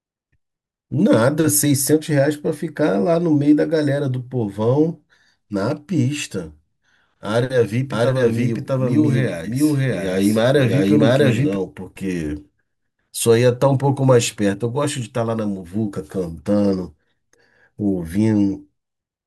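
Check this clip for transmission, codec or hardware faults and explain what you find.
One fault is present. Doubled audio track, 7.92 to 11.56 s: the speech is joined by a full-band copy of itself running roughly 0.7 s behind at about equal loudness. The copy has no decay or room colour and starts and stops abruptly. It likely comes from the audio being captured a second time through a slower path.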